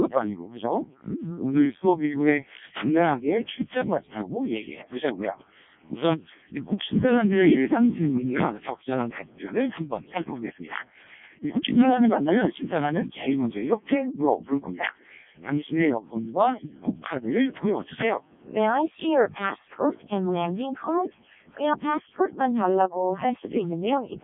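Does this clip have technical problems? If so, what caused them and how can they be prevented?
Yes. Codec 2 vocoder damage runs through the whole clip: the speech sounds robotic and buzzy, confined to roughly 150 Hz to 3.6 kHz with nothing above 3.6 kHz. Codec 2 transmits only pitch, voicing, energy and a coarse spectral envelope, then rebuilds the speech from sine waves, so the original waveform is discarded. The heavy damage points to its lowest mode, around 0.7 kbit/s. To prevent this, record or transmit through a waveform codec at a higher bitrate.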